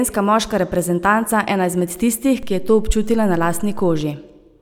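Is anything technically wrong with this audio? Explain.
Yes. At 2.43 s a low thump breaks into the speech, and a second one follows at 4.01 s. Both come from a DC step: the waveform's zero line jumps by about -24 dBFS, stays offset, then steps back. The speech itself carries on unchanged through both.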